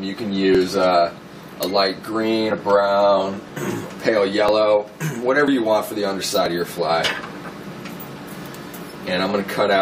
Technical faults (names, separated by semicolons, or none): overlap between stream segments